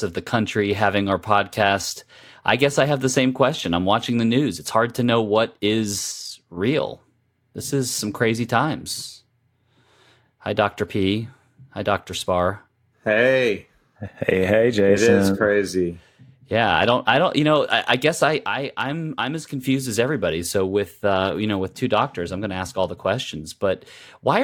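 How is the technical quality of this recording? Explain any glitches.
The speech has two short, sudden level dips. At 6.12 to 6.57 s, after "hard to know what", and at 18.47 to 19.64 s, between "I I guess I" and "as everybody", the sound falls abruptly by about 6 dB. This is likely one channel dropping out: the mono sum loses half of what both channels share. A waveform shows the envelope suddenly halved, and a spectrogram shows all bands uniformly dimmer with sharp edges.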